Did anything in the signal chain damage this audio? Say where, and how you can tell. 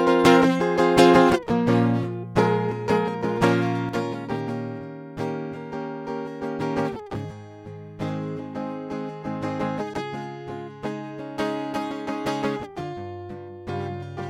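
Yes. One channel drops out at 3.89 s. The music falls abruptly by about 6 dB and stays down to the end. Only one side remains, so the mono sum halves in amplitude. The likely stage is analogue wiring, such as a failed cable or connector.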